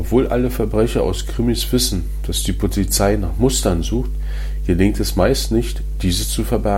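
From the first moment to the last, the speech sits on a continuous mains hum at 50 Hz. Power-line current has found its way into the signal path, most plausibly through a ground loop between connected equipment or magnetic coupling from a nearby transformer. The hum is loud, only about 5 dB under the speech, so it reads as a steady low drone with some low harmonics, never fading during pauses.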